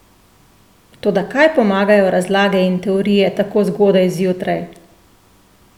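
No technical faults can be heard anywhere in the recording. The speech runs on without any interruption or disturbance to the sound.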